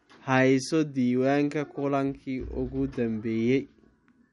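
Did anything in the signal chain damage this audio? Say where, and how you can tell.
Yes, at the codec stage, across the whole speech clip: the sound is watery and swirly, and a spectrogram shows a hard ceiling at 11.1 kHz with flickering gaps below it. This points to likely MP3 compression at a low bitrate, with the encoder discarding treble and dropping weak frequency lines frame by frame.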